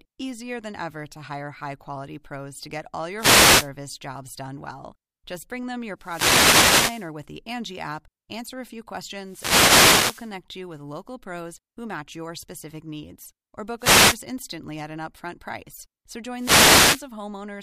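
Wireless microphone noise hits break into the speech five times: 3.15 to 3.70 s, between "pros to get all" and "jobs done well"; 5.98 to 7.12 s; 9.24 to 10.33 s, just before "you with local pros"; 13.78 to 14.21 s, before "instantly at an upfront"; and 16.36 to 17.08 s. Each is a swish of static that swells as the FM radio link fades, then recedes. Unlike steady hiss or digital dropouts, the noise rises and falls with signal strength and covers the voice rather than silencing it.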